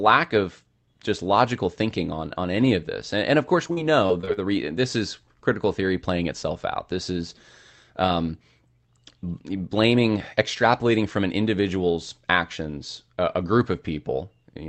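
Right after "and of course", from 3.67 to 4.39 s, the call stream suffered repeated packet loss (robotic sound). Six gaps, the longest 41 ms, were patched by stretching the preceding sound, filling roughly a fifth of that span. The speech turns choppy, with fragments missing.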